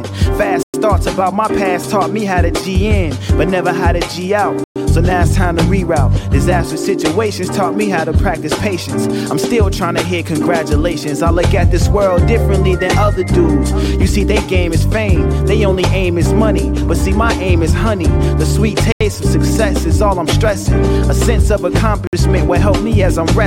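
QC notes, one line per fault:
0.63–0.74 s, 4.64–4.76 s, 18.92–19.01 s, 22.07–22.13 s: Bluetooth stall. The sound drops to clean silence for about 109, 118, 85 and 58 ms, then resumes where it stopped. This is likely a wireless buffer running dry while delayed packets were resent.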